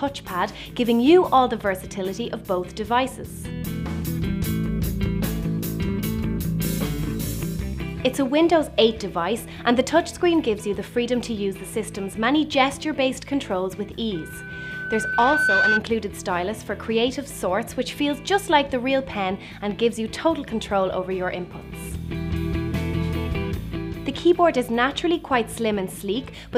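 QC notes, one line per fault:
14.15 to 15.83 s, loudspeaker feedback squeal. A pure tone at 1.5 kHz swells over roughly a second and a half until it sits about 5 dB above the programme. The microphone is hearing its own loudspeaker. At that frequency the loop gain passes one, so the tone feeds itself.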